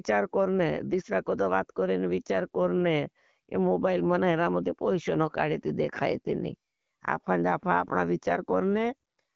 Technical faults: none

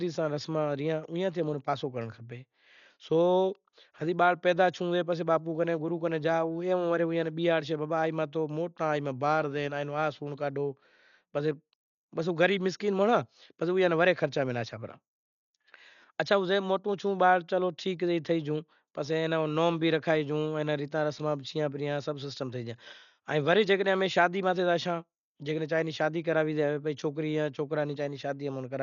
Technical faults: Dolby Digital compression

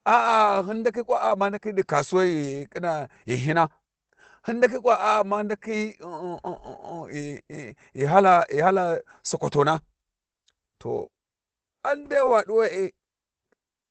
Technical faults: lost packet rebuilt from error correction

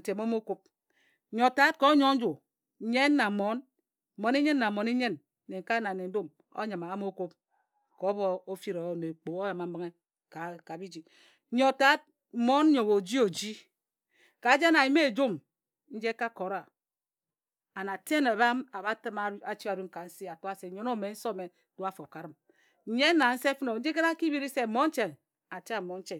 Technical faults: none

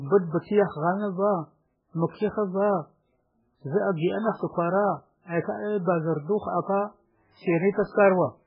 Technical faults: MP3 compression

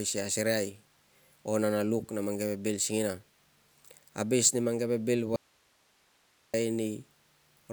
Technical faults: audio dropout to a faint residue

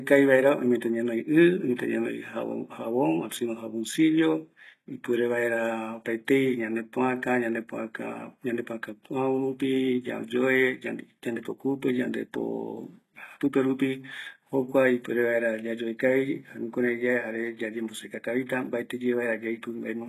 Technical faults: HE-AAC compression; block of digital silence

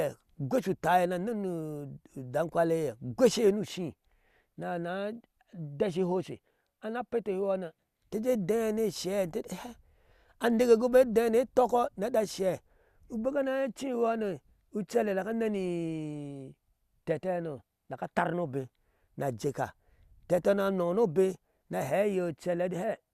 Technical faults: none

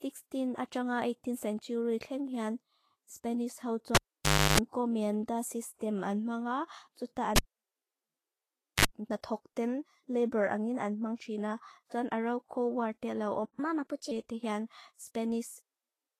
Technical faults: low-bitrate audio saved at a high bitrate; cable pulled and plugged in; playback stall; catch-up at higher speed

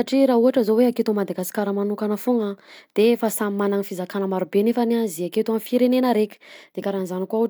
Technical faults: none

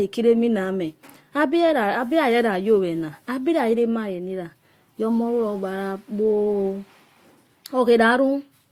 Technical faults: none

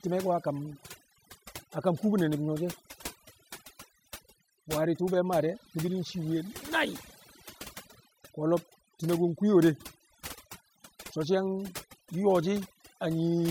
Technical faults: overdone noise removal; mains buzz

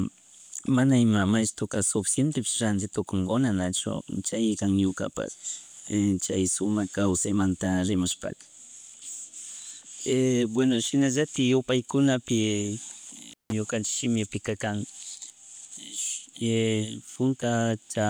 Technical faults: intermittent contact

